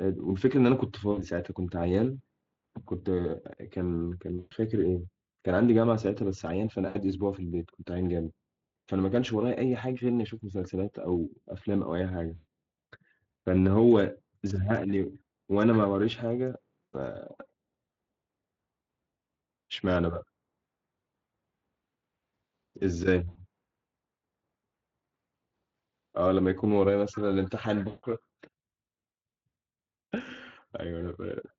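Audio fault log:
1.11, 4.37, 6.87, 12.35, 16.88, 23.29 and 27.87 s, VoIP packet loss concealed by the speech codec: gaps of 60 to 160 ms in the Speex stream, where the decoder repeats its last pitch and spectral envelope at falling gain. Each gap becomes a brief buzzy tone or coloured noise that fades and stays weak as the signal returns. On a spectrogram, frozen horizontal harmonics fade out. In the waveform, periodic cycles decay in amplitude.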